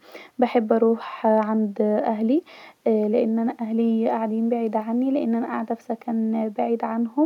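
Nothing here trips the ear at any point, with no technical faults turning up anywhere in the recording.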